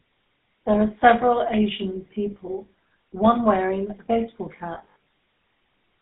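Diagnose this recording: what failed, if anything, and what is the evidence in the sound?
Codec stage: the GSM full-rate codec. Audio throughout is confined to about 150 Hz to 3.7 kHz with a buzzy, gravelly roughness, fitting 13 kbps GSM rather than simple band-limiting, which would stay smooth.

Network stage: lost GSM frames from 4.74 to 4.96 s. About 180 ms went missing in short bursts, the longest around 70 ms, each held as a metallic ring instead of the clean silent gaps of ordinary dropouts.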